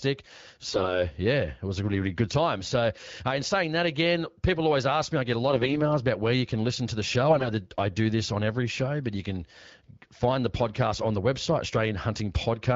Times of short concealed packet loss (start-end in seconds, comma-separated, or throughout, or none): none